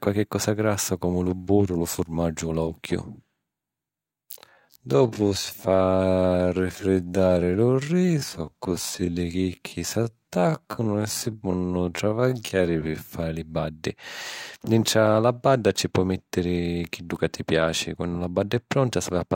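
Software likely stretched the speech from 3.87 s to 13.11 s, running it at 0.58 times its normal pace and repeating short slices to hold the pitch. In this time-stretched section the pace drags abruptly while the pitch stays put.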